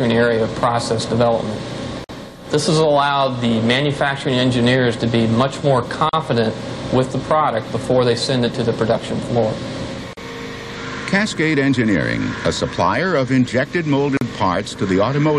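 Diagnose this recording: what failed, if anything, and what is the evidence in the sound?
The failure is at the codec stage: gaps at a join of encoded pieces. The sound drops out at 2.04 s for about 50 ms, then at 6.09, 10.13 and 14.17 s for about 40 ms each, about every 4 s. Each segment's encoder delay and final-frame padding were left in when the pieces were joined. Unlike a network dropout, the spacing is regular, and the sound resumes where it stopped with nothing missing.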